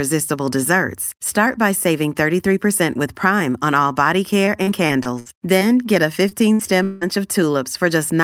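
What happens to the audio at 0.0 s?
Nothing goes wrong at 0.0 s; the audio is intact, with no dropout, click or distortion at that moment.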